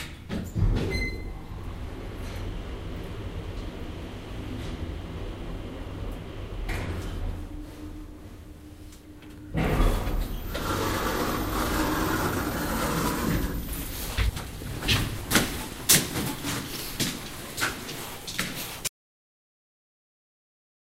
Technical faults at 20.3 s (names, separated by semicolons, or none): audio dropout to silence